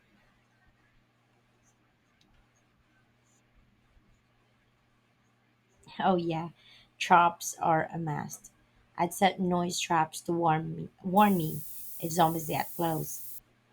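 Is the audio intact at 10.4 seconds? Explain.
Yes, at 10.4 seconds the speech is intact, with no dropout, glitch or other fault to be heard at that moment.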